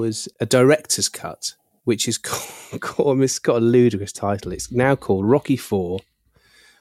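From 0.44 to 2.45 s, the speech has pre-emphasis left on. The treble was lifted before storage or transmission, and the matching de-emphasis was never applied on playback. High frequencies stand about 8 dB above the 1 kHz level at 10 kHz. The shape of the lift fits the CD 50/15 µs curve. The voice turns thin and bright in this stretch. Sibilants hiss and sound harsh.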